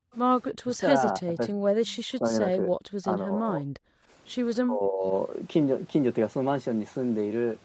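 From 0.00 to 0.12 s the room background is pulled down by about 29 dB for roughly a tenth of a second. This is background gated by the echo canceller, which clamps the microphone while the loudspeaker plays. On a spectrogram the noise floor briefly goes dark.

Speech dips in pieces at 0.61–0.81 s (a deep cut of around 40 dB), 1.2–1.5 s (a mild dip near 10 dB), and 2.06–2.73 s (again near 40 dB, covering about half a second). This is speech suppressed in double talk, likely because the canceller could not separate the talker from loudspeaker echo and attenuated both. It sounds like words dipping or cutting out in pieces. The waveform shows notched envelopes, and the spectrogram shows hollowed gaps in the harmonics.

At 4.03–4.1 s the background gating returns, but shallower, about 10 dB for roughly 70 ms. It is a brief duck in the room tone, seen as a short, darker band in the noise floor.

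From 4.65 to 5.05 s the double-talk suppression appears once more, lowering the speech by roughly 20 dB over most of that span. The talker sounds pushed back, with a visibly shrunken waveform. The spectrum throughout stops at 8 kHz, as expected for the Opus call path.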